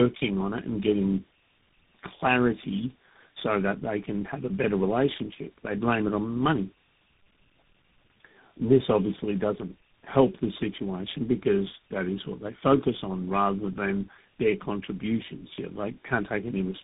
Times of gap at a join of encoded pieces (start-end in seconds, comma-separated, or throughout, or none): none